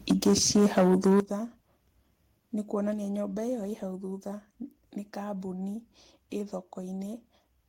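Speech opens with microphone overload from 0.1 to 1.2 s: peaks are driven about 8 dB past full scale and a large share of samples are flattened, giving a harsh crackle that, unlike codec distortion, tracks loudness, likely from excessive input gain. At 1.2 s a microphone volume stepped down event drops voice and background together by about 12 dB in one instant, likely automatic gain control reacting to the clipping, distinguishable from a speaker simply moving away by its abrupt, uniform step.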